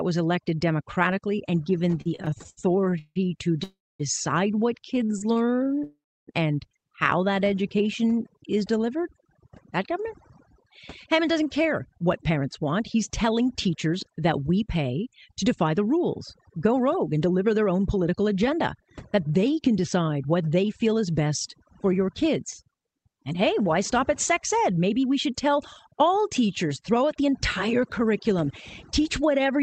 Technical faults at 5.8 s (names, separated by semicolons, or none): overdone noise removal; repeated stalls (stutter); call audio freeze